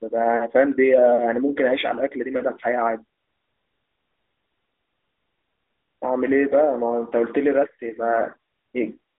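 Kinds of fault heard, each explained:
The speech comes through a narrowband telephone-style channel spanning roughly 250 Hz to 3.7 kHz, and nothing in it registers as a fault.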